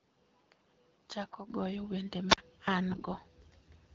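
From the start to 1.5 s the recording likely came through an input switched to a poorer device, passing nothing above 7.6 kHz, with a noise floor about 35 dB under the speech. The speech sits about 5 dB quieter and sounds duller and boxier, then clears at 1.5 s with no gap at the change.

From 1.25 to 1.36 s, AMR bit errors hit the link. Flipped low-priority bits threw off the pulse positions and fine gain and spectral values while the frames were still accepted. The speech keeps its rough pitch and loudness but briefly turns hoarse and gargly.

At 2.29 s, a wireless microphone squelch dropout occurs. The FM signal faded far enough for the receiver's squelch to mute the output for about 44 ms. A short burst of hiss leads into a near-silent hole before the speech returns by 2.38 s.

From 2.9 to 3.26 s, a longer run of AMR bit errors, at a lower rate than the first, corrupts the same less-protected parameters. 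This gives a stretch of scratchy, raspy speech over the 12.65 kbit/s AMR-WB coding, which otherwise keeps the speech clear.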